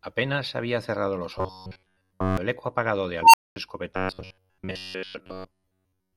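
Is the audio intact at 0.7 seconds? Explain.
Yes, the audio is intact at 0.7 seconds, with no fault audible at that moment.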